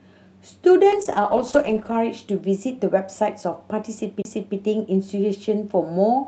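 Speech with two faults. From 0.92 to 2.05 s a call bitrate drop makes the voice coarse and muffled, consistent with Opus falling from 64 to 12 kbps; the spectrogram's upper band goes dark. At 4.22 s a CD skip gives a tick, a gap of about 30 ms and a jump to another spot, visible as a flat waveform gap.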